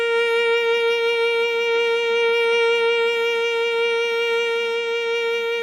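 Nothing in this music stood out as a technical fault on listening.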